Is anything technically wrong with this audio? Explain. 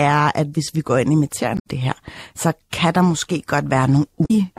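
Yes. Damaged data in a compressed stream corrupts the speech twice, from 1.55 to 1.67 s and from 4.22 to 4.31 s. Corrupt bytes make the decoder misread frames and lose sync until it finds a valid header, producing brief glitches.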